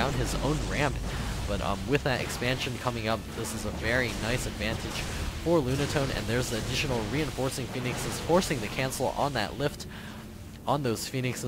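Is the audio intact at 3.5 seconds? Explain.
No. At 3.5 seconds the audio sits within a run of regular clicks, repeating every 1.19 s from 0.30 to 10.98 s. These are likely clock drift buffer slips: two clocks differing by roughly 150 ppm force a few samples to be dropped or repeated at each click.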